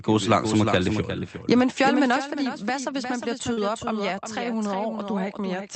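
From start to finish the speech carries a doubled audio track: a second full-band copy trails the original by roughly 0.4 s, a few dB quieter, with no reverberant tail or room colouring of its own. It sounds like a dry, rhythmic stutter layered under every phrase rather than an echo from a space. This is likely a second capture through a slower path being mixed back in. On a spectrogram each syllable's pattern reappears shifted right by a constant offset, slightly fainter, and the waveform shows overlapping, staggered envelopes.

At 1.02 s the level drops abruptly by about 4 dB, and at 2.16 s it falls again by about 5 dB. Both the speech and the background step down together with no fade, which marks these as the microphone volume stepped down. The likely cause is the call software judging the input too hot and cutting the device's gain in a single move. The waveform shows a clean, sudden narrowing of the envelope at each point, and the spectrogram darkens evenly across all frequencies.

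From 3.53 to 3.59 s there is a short concealed packet loss. About 40 ms of audio never arrived in time, and the receiver bridged 34 ms of it by extending the preceding sound before blending back into the real signal. The result is a brief smeared, wobbly moment in the speech. On a spectrogram the harmonics or noise in that window run flat and blurred, losing fine detail, before rejoining the true signal. Across the whole clip, the Opus call path limits content to below 8 kHz.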